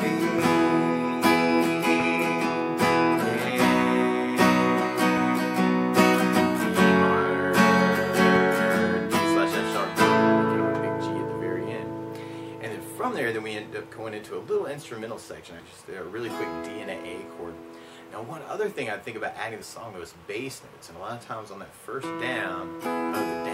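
At 15.59, 19.61 and 22.85 s, compressed frames are skipped. The audio leaps ahead about 150, 50 and 150 ms.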